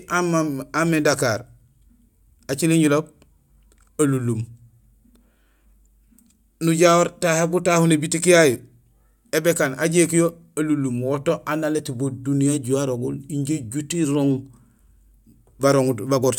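Nothing goes wrong anywhere in this stretch of speech, so there's no fault to point to at any moment.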